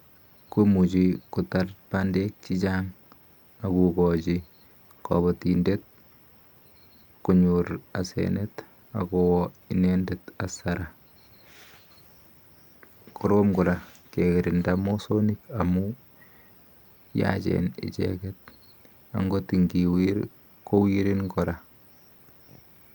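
No technical faults occur at any point in the clip, so there are none to describe in time order.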